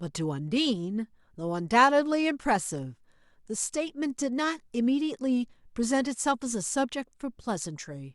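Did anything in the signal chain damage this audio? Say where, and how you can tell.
No, nothing in the signal chain has audibly damaged this speech recording. No stage between capture and playback leaves any evidence in the sound.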